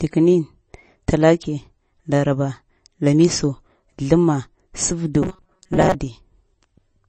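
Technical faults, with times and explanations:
Throughout: MP3 compression. Codec damage is plainly audible as a watery swirl, with metallic chirps on s sounds. This points to a bitrate near 32 kbps, likely starved of bits.
5.22–5.95 s: robotic sound from repeated short buffers. The speech turns into a rigid metallic buzz at 188 Hz. Roughly half the audio is replaced by repeats, likely of a block about 5.3 ms long, which forces that fixed pitch.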